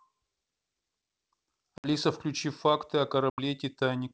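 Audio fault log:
1.78–1.87 s and 3.30–3.40 s, packet loss on an ADPCM call: two hard-edged holes, about 60 ms and 80 ms of lost audio, each a few packets' worth, replaced by silence in the G.722 wideband stream. When speech resumes, the receiver's adaptive predictor and step size no longer match the sender's, so the first tens of milliseconds come back slightly distorted before the decoder settles.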